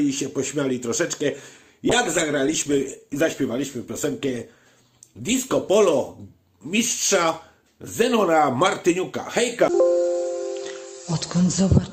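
From 1.91 s to 5.77 s, a call bitrate drop cuts the encoder's bit budget sharply, which fits a fall from about 96 kbps to 28 kbps. For roughly 3.8 s the sound turns coarse, watery and dull, losing its top end until the rate recovers.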